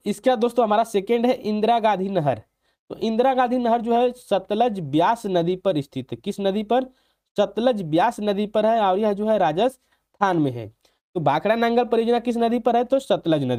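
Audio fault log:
No faults detected.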